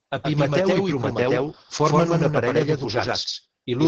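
From start to finish the speech is doubled. The likely cause is a second capture path, or an edit, that mixes in another copy of the same audio about a tenth of a second late. The copy plays at roughly the same level as the original and carries no decay or room colour. Every syllable has a hard, slapback double just behind it, which smears consonant onsets and makes the speech sound stuttered rather than reverberant.

Throughout, the same speech also shows heavy Opus voice compression. The linear-prediction voice coder was run at a low bitrate, which fits something around 10 kbps, so it codes the excitation coarsely and discards detail. Almost nothing reaches above 12.4 kHz, so sibilants lose their air. The voice sounds hoarse, slightly robotic and muffled.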